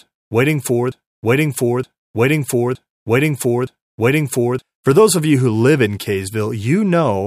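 Right after "waiting for", from 0.92 to 4.62 s, a broken-record loop replays one 0.92 s fragment four times back to back, likely a stalled stream resending its last piece. Unlike echo, each repeat is identical and undecayed, and the missing speech never returns.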